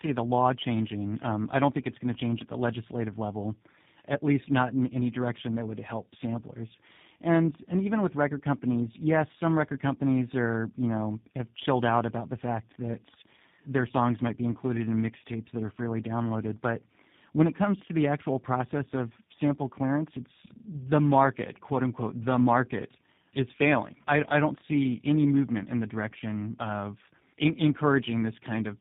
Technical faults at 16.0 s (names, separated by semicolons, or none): tandem speech coding